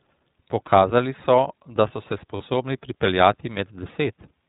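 A speech clip carried throughout by the iLBC codec, with nothing above 4 kHz. Its damage is plainly audible as a rough, slightly synthetic edge, from its coding of each 20 ms frame at 15.2 kbps. At 2.36 to 2.42 s, lost iLBC frames leave a 40 ms gap, consistent with two missing frames. The gap is filled by a held, faintly buzzy repeat of the last pitch cycle, and the speech recovers almost immediately.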